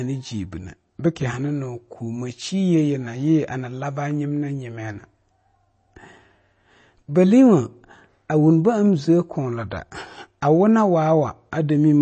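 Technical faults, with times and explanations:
Throughout, MP3 compression: nothing comes through above about 8.3 kHz, so the speech has a dull, capped top end, and there's a plainly audible watery, swirly quality running under it. That's likely an MP3 encode squeezed for bits, which fits something around 32 kbps. The encoder chops the treble at a fixed point and drops quieter frequency lines, which then flicker on and off frame to frame. That gives the burbling texture and softens the edges of onsets.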